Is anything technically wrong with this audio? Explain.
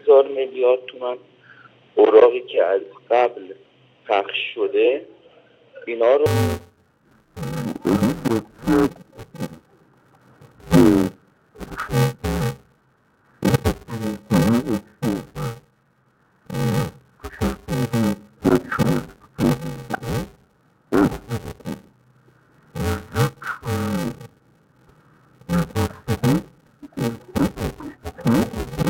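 Yes. From 6.26 s to the end, the audio shows interleaved audio read as planar. Each short block is split in half, not de-interleaved. The halves play together at half speed, and each block is 128 samples. The sound turns dull and robotic, buzzing at about 345 Hz, with no clear octave drop.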